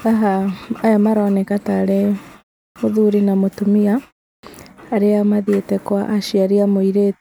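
The output device drops into a low-power state during short silences and needs time to wake, causing a clipped start after a pause at 2.69 s and 4.37 s. Each follows a pause of about a third of a second, and roughly 68 ms and 62 ms of speech are swallowed, so words snap in abruptly without their opening sounds.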